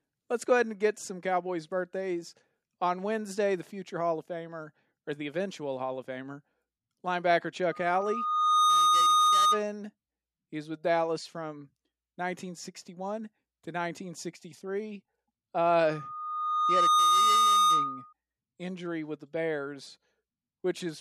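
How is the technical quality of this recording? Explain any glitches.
The recording is marred by loudspeaker feedback squeal twice, from 7.71 to 9.64 s and from 15.81 to 18.13 s, the second ending just before "injury with the". The microphone was picking up the loudspeaker it fed, and at 1.2 kHz the loop gain rose above one, so that frequency reinforced itself. Each time a pure 1.2 kHz tone swells over roughly a second into a squeal sitting around 10 dB louder than the speech.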